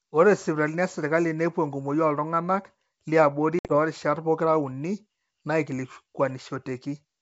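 Packet loss on an ADPCM call hits between 3.59 and 3.76 s. About 70 ms of the sound drops out, scattered over roughly 100 ms, with the longest gap 60 ms, which suggests several lost packets replaced by hard-edged silence. Since G.722 codes each band as differences against a running prediction, the decoder's predictor and step size lose track of the sender's. The speech resumes slightly distorted before settling.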